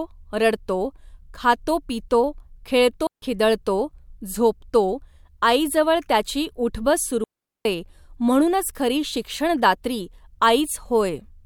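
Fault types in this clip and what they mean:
Digital wireless dropout: the receiver loses too much data and mutes cleanly, leaving near-silent holes of about 0.15 s at 3.07 s and 0.41 s at 7.24 s.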